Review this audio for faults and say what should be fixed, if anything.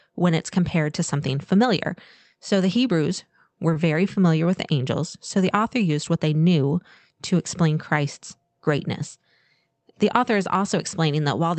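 Short concealed packet loss occurs twice, at 3.73 to 3.77 s and 4.13 to 4.18 s. The second falls between "were very" and "with the angels so". Each time, about 20 ms of audio never arrived, which suggests one lost packet. The decoder extended the preceding sound to cover the gap, then blended back. Each event is heard as a brief smear or wobble.

Preventing it means reducing packet loss on the network and enabling Opus in-band forward error correction so lost frames can be rebuilt.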